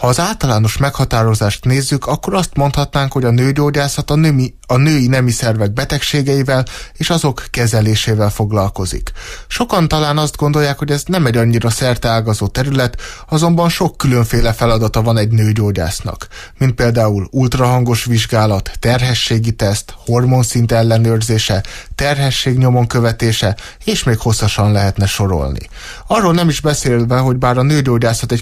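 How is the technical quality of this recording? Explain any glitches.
No glitches turn up anywhere in the recording, so there's nothing here that needs explaining.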